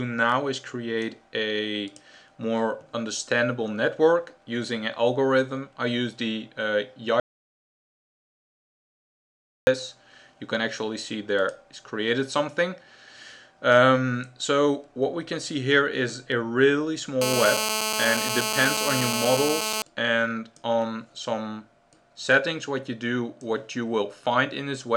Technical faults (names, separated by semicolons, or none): audio dropout to silence; GSM phone buzz